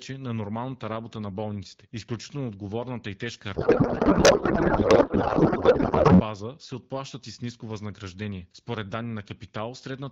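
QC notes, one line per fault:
3.55–6.21 s, codec payload misread: right after "отговорната и тежка" the speech turns into garbled noise and warble that barely follows it, until "се отплащат и с". That fits octet-aligned AMR frames being unpacked as bandwidth-efficient, so every field lands in the wrong spot.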